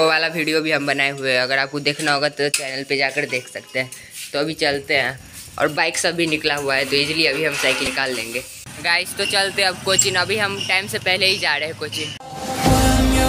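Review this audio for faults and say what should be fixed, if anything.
A brief glitch cuts through the audio from 7.84 to 7.87 s, lasting about 34 ms. It comes from damaged data in a compressed stream: corrupted bytes made the decoder misread frames, lose sync and hunt for the next valid frame header. To prevent it, verify file integrity with checksums and use a transport that detects and resends corrupted packets.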